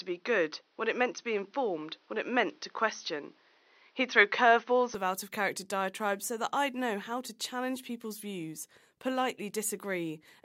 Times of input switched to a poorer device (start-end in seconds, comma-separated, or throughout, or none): 0.00-4.95